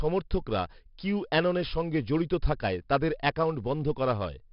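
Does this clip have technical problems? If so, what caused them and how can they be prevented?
Yes. The whole speech clip carries 4-bit ADPCM compression damage. Each sample is coded as a coarse 4-bit step from a prediction, so gritty hiss rides on every loud syllable and attacks distort. Nothing sounds above 5.3 kHz, which fits a low sample rate near 11 kHz and about 44 kbps. Prevent this by recording at a higher sample rate to a lossless or higher-bitrate format.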